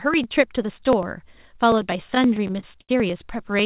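From 0.14 s to the end, the speech carries periodic USB or driver dropouts: tiny slices of audio are skipped every 0.099 s, about ten times a second. Something blocks the driver on a fixed cycle. The result is a steady ticking that sounds only under signal.

Between 2.08 s and 2.91 s, repeated stalls (stutter) set in. Packets arrived late, and the jitter buffer ran dry ten times. Each gap was bridged by stretching the last sound, the longest for 80 ms. Nothing is lost, but the speech drags and stutters. The call path's G.711 coding leaves nothing above 4 kHz.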